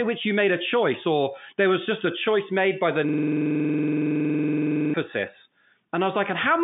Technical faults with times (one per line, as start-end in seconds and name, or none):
3.09-4.94 system hang loop